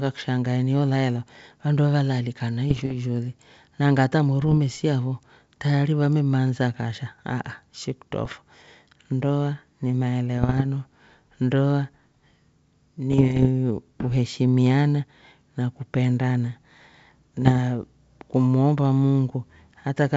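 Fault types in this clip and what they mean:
Bit errors on an ADPCM link: flipped bits upset the decoder's step size and predictor, giving six rough bursts with pops and level jumps, not the silent gaps of packet loss.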